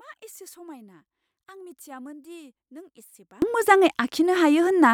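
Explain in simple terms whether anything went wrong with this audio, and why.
From the start to about 3.42 s, the speech almost disappears when the sound is heard through a single speaker, leaving only a faint trace. The likely cause is one channel inverted: one side of the stereo pair is flipped upside down, so the centred speech, identical on both sides, cancels itself out when combined. A simple volume drop would keep the speech full-bodied, just quieter. Here it almost vanishes, and it comes back normally once the cancelling stops.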